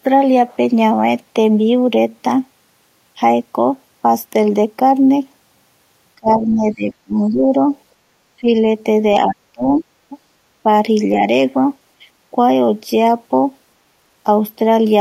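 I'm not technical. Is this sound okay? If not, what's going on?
No. The speech gets swallowed in places: it sinks sharply and partly vanishes from 6.16 to 7.46 s, dips briefly at 8.41 to 8.47 s, and drops away again from 9.53 to 9.85 s. This is speech suppressed in double talk, likely because both people spoke at once and the echo canceller turned everything down together.

Just before that last dropout, at 9.31 to 9.35 s, a faint scrap of a second voice slips in. This is the other side's voice leaking through, most likely their loudspeaker sound that the microphone picked up and wasn't fully removed.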